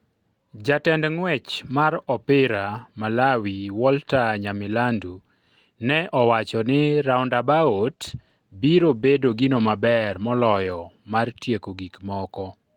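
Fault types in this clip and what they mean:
call bitrate drop: from 7.65 s to 10.79 s the speech turns coarser and rougher. The encoder is given fewer bits, which fits a fall from 32 to 16 kbps. Unlike packet loss, nothing drops out; quality stays degraded, then recovers.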